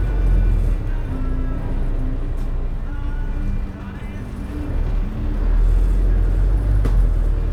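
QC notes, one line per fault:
3.99–4.01 s, corrupt frame decoded: a short glitch peaking around -20 dBFS, where a couple of damaged compressed frames got played anyway with garbled spectral content.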